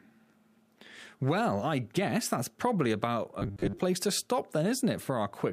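From 3.39 to 3.79 s the sound turns into a rigid, metallic 100 Hz buzz, robotic sound likely from repeating 10 ms buffers covering about half the audio.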